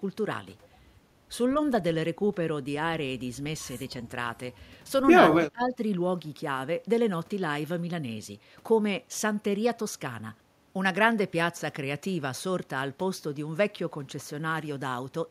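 Speech, with one fault: speech suppressed in double talk from 5.36 to 5.8 s, where the level drops by up to roughly 25 dB for about a third of a second. The likely cause is an echo canceller mistaking overlapping talk for loudspeaker echo and attenuating it.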